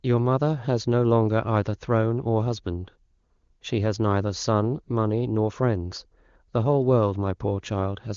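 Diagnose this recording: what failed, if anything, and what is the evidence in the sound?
Nothing failed: the speech comes through intact at every stage, and its band limit near 7 kHz with clear, unroughened consonants fits an AMR wideband (HD Voice) codec path running at one of its higher rates.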